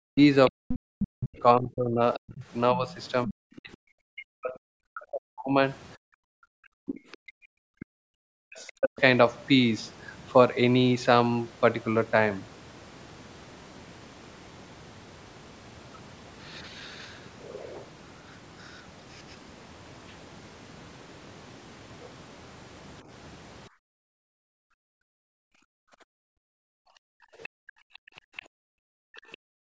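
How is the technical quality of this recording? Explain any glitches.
The recording has clear echo-canceller problems in the first nine seconds and again near the end. The call microphone processing, with nothing above 8 kHz, is working as intended.

Speech suppressed in double talk, from 0.09 to 8.98 s and briefly at 27.22 to 27.3 s: the talker's voice dips and breaks up for roughly five seconds in total, at worst by around 40 dB. Overlapping talk likely made the canceller duck both sides. This follows the overlap, unlike a level or network dropout.

Other side's voice leaking through, from 0.47 to 3.59 s, 8.67 to 9.01 s and 27.43 to 29.37 s: a second voice sits under the talker. It is strong at first, around 10 dB down, and faint later, around 25 to 30 dB down. This is likely loudspeaker echo the canceller didn't fully remove.

Background gated by the echo canceller, from 23.69 s to the end: the room sound drops by about 40 dB in stretches totalling about five seconds, recovering when the canceller releases. 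It affects the ambience while the loudspeaker plays, rather than cutting the talker's voice during overlap.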